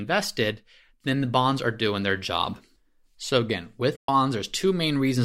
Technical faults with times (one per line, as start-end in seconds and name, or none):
3.95-4.09 AAC frame loss with muting